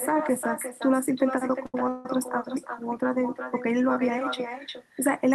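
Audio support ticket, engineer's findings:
Echo with no canceller, whole clip. Speech returns around 0.4 s later, about 8 dB down, thin. Far-end loudspeaker pickup not removed before sending back.

Short stall from a late packet, 1.66 to 1.75 s. Sound held for 79 ms with slight buzz or dip. Jitter buffer underrun, playout resumed where it stopped, nothing lost.

Call audio freeze, 1.89 to 2.06 s. Sound stretched into a 162 ms fading buzz or hiss, no silence, then resumes with nothing missing. Likely delayed packets emptying the jitter buffer.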